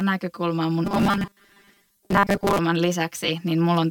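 From the start, channel delay (comb filtering) makes the speech hollow and phasey. One channel lags by roughly 5 ms before the mono sum, carving fixed notches from around 100 Hz upward, unlike a wandering flanger sweep.

From 0.85 to 2.59 s comes robotic sound from repeated short buffers: a rigid, metallic 200 Hz buzz, likely from tiny buffers looped while most real audio is skipped. Unlike the static notches, it imposes a fixed pitch.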